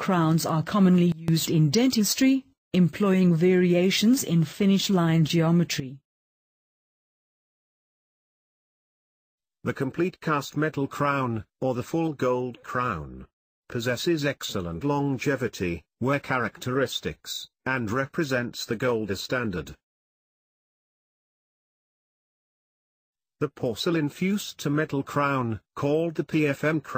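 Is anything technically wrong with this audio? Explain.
Yes. At 1.12 to 1.28 s the sound and its background noise drop together by about 19 dB, and at 5.80 to 7.05 s by about 12 dB. This is a sudden gain jump, likely a digital gain step applied between samples without any ramp.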